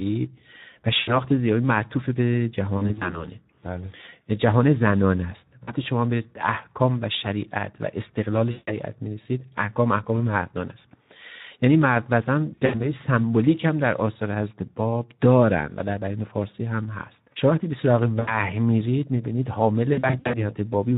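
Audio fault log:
throughout: Speex codec. The speech has a hoarse, noisy graininess, and the top end is a hissy fill rather than real detail. That fits Speex at around 11 kbps, where the CELP excitation is starved of bits.
0.99–1.18, 2.78–3.28, 5.64–5.75, 8.51–8.76, 12.53–12.80, 18.20–18.37, 19.93–20.45: VoIP packet loss concealed by the speech codec. Each gap gets smeared into a buzzy tone or coloured noise that fades. The decoder is stretching its last pitch and filter. Some stretches, like 2.78 and 19.93, stutter across scattered short losses, and the voice stays weak briefly afterwards.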